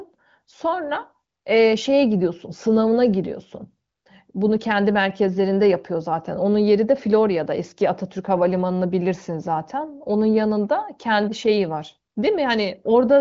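The clip is speech carried over the AMR wideband (HD Voice) codec at about 23 kbit/s, with nothing above 7.5 kHz, and nothing is technically wrong with it.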